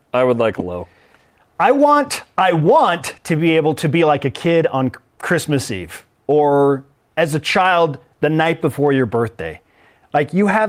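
At 0.59 to 0.61 s the speech jumps abruptly forward, with the two sides butted together and no silence between them. This is a skip ahead: about a second of audio was discarded, in transit or by an overflowing jitter buffer, while later audio was already queued.

From 0.71 to 4.81 s the speech runs hurried, at about 113% of normal speed, with its pitch unchanged. This is a jitter buffer speed-up. The receiver held more audio than it wanted and trimmed many short pitch-period slices, removing roughly half a second to bring the delay back down.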